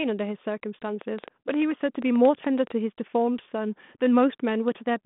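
From 1.01 to 2.73 s, a train of clicks ticks over the speech at about 7.6 per second, some fifteen near-identical pulses rising around 10 dB above the speech. Unlike codec crackle, they keep their shape, space unevenly, and hit pauses too. Nearby equipment interference is the likely cause. All of this sits inside the narrow telephone band of the G.726 link, with nothing above 3.8 kHz.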